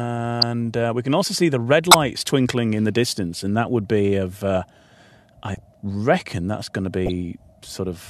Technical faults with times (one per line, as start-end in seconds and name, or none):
0.41-0.43 corrupt frame decoded
1.91-1.94 corrupt frame decoded
5.47-5.59 corrupt frame decoded
7.06-7.11 corrupt frame decoded